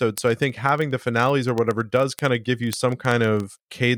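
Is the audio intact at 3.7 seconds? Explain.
No. At 3.7 seconds you're in the middle of a run of word clock ticks that starts around 0.11 s and lasts to the end of the clip. The receiving device is free-running on its own clock, about 700 ppm off the sender's, so the two slip past each other roughly every 30 ms. Each slip drops or repeats one sample. You get around a hundred sharp, uneven ticks at a steady rate over the speech.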